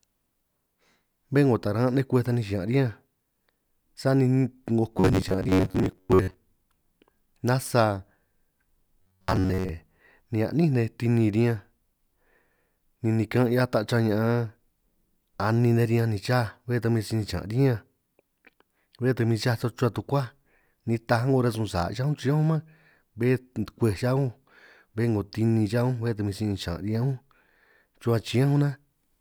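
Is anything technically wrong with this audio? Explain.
Yes. Robotic sound from repeated short buffers appears from 4.98 to 6.34 s and again from 9.02 to 9.69 s. A steady buzz at 93.8 Hz points to a segment of about 10.7 ms being looped, most likely because new audio was arriving too slowly and the gaps were filled with repeats. Roughly half the first stretch and most of the second is repeated material, so the speech becomes a rigid, metallic drone that only loosely tracks the words.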